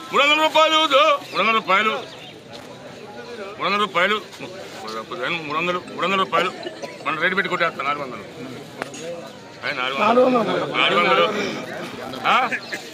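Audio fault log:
2.54 to 2.67 s and 11.64 to 12.25 s, loose connector crackle: a worn or dirty contact in the signal path repeatedly made and broke as it shifted, chopping the audio on and off. This produces irregular scratchy crackle bursts, brief at first, then lasting about 0.6 s.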